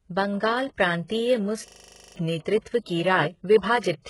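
The whole clip carries heavy codec damage, most likely from HE-AAC compression at a very low bitrate, around 12 kbps. Nothing comes through above about 11.5 kHz, and the treble that is there is rebuilt from lower bands rather than carried faithfully. The s sounds and other hiss-like parts of the speech come out gritty and metallic, because the copied-up harmonics don't line up with the real ones below the crossover.

From 1.68 to 2.16 s there's a system hang loop. The machine froze while the sound hardware kept cycling one buffer, so a single 40 ms slice of audio repeats about a dozen times. At that length the loop runs at 25 Hz, which lands between a buzz and a rapid stutter, a hard mechanical rattle. Roughly half a second of the real speech is lost under it.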